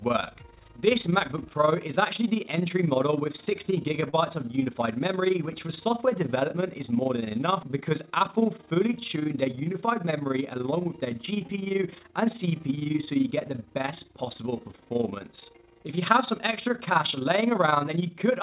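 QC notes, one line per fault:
Throughout: overlap-add ripple. The level pulses up and down by about 11 dB at a rate of around 20 Hz, which gives a fast, rough flutter over the whole clip. The frames were windowed and rejoined with an overlap whose gain does not sum evenly, so the loudness dips once per frame. Unlike a gap or a stall, it never stops and never loses or holds any sound. The flutter rides on top of the narrow call-codec band, which has nothing above 4 kHz.
4.10–4.15 s: short stall from a late packet. For about 28 ms, one sound is held too long, and then the audio resumes exactly where it left off. A packet arrived late, the jitter buffer ran dry, and the receiver stretched the last sound to fill the wait. Nothing is lost, which separates this from a dropout. The delay grows by 28 ms instead.
8.98–9.56 s: jitter buffer speed-up. For just over half a second, the audio runs at about 106% speed and sounds slightly hurried, but the pitch stays where it was. 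The buffer had built up more audio than it aims for, so the receiver trimmed roughly 40 ms in total by cutting out short pitch-period pieces many times in a row. A resampling speed change would raise the pitch. This does not, and the rush ends at 9.56 s.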